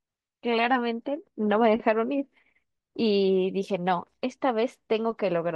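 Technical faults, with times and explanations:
3.26–5.56 s, sample clock jitter: the converter's clock wanders by around a microsecond, so samples land slightly early or late. Steep, fast-changing parts of the speech pick up the largest errors, adding a faint hiss roughly 50 dB down that swells with louder, brighter sounds and disappears in pauses.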